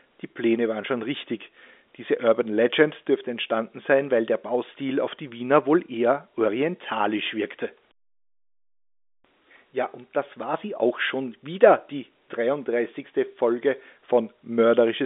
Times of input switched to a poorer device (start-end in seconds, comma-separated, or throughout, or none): none